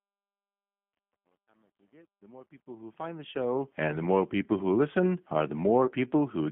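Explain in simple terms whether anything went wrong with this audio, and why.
G.729 codec, throughout: the speech was squeezed by a low-rate phone codec that rebuilds the voice from a rough model, so it sounds thin, slightly rough and synthetic.

VoIP packet loss concealed by the speech codec, from 5.86 to 5.92 s, right after "people who listen are": one small chunk of sound went missing, and the decoder filled the gap by guessing from the moments before, leaving a brief stretched sound that fades.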